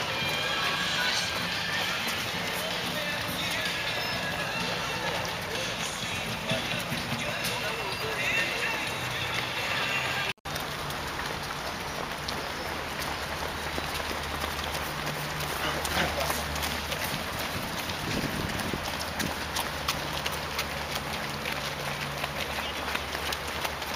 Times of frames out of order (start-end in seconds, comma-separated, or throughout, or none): none